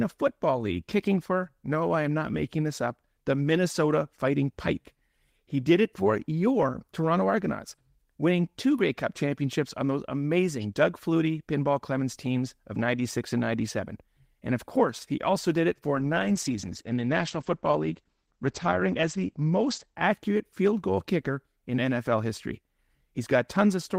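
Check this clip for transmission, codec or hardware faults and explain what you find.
One transmission fault appears: a call bitrate drop. From 15.97 to 20.05 s, the encoder falls from 32 to 12 kbps. Highs above 8 kHz vanish, and speech turns muffled and watery from "field goal kicker in".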